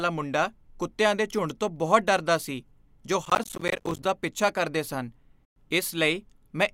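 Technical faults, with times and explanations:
3.25–4.05 s, processor overload crackle: after "ਬਹੁਤ ਡਰਦਾ ਸੀ ਜੋ", about thirty missed deadlines, each leaving a hard-edged silent gap of roughly 10 ms, tear the speech into gritty crackle until "ਪਿੱਛਾ ਕਰਦੇ ਸਨ".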